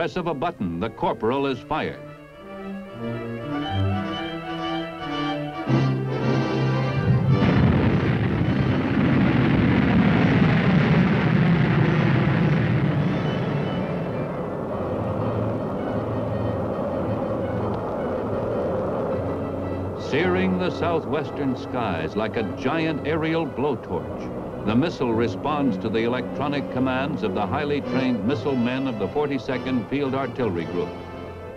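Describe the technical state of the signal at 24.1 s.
At 24.1 s the signal is intact, with no audible fault at that moment.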